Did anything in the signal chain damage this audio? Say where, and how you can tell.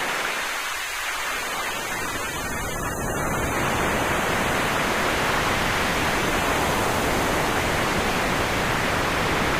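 No, nothing in the chain damaged this audio.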